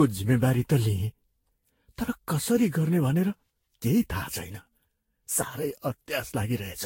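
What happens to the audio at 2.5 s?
At 2.5 s the speech has the swirly, hollow smear of generation loss, present across the whole clip, not just at that moment. Its likely cause is a chain of roughly seven lossy re-encodes, each quantising on a shifted frame grid so the noise and spectral holes build up. Nothing sounds above 16.6 kHz, and the damage is worse than a single encode near 60 kbit/s would leave, with blurred attacks rather than one clean band limit.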